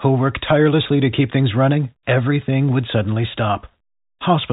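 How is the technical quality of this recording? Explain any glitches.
No glitches turn up anywhere in this speech recording; it simply has the narrow sound of a regular phone line, with nothing above about 3.8 kHz getting through, which is just how G.711 telephone coding works and not a fault.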